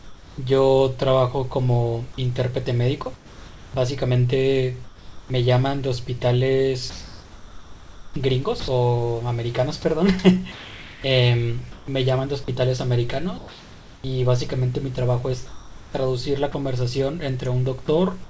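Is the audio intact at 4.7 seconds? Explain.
No. From 2.14 to 5.30 s the sound is chopped, with about 1.12 s of quiet syllables and word edges swapped for smooth synthetic comfort noise, likely sound chopped by the voice detector gating transmission on and off. Unlike packet loss, gaps track quiet passages and fill with steady hiss, not silence or repeats.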